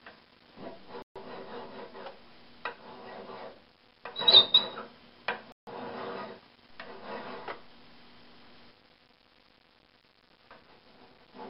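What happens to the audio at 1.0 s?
At about 1.02 s the sound drops out to dead silence for roughly 132 ms, coming back at 1.16 s. That gap is most likely a Bluetooth stall: radio interference held up packets on the wireless link, the headphones' small playback buffer ran empty, and output simply paused until the delayed data got through. The sound just cuts to a hole in the audio and then playback carries on.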